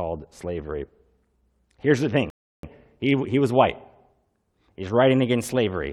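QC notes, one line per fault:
2.30–2.63 s, rebuffering stall: the speech drops to dead silence for 0.33 s and then carries on exactly where it left off, because playback ran dry waiting for data. On the waveform there's a flat silent gap, and on the spectrogram a clean empty vertical band.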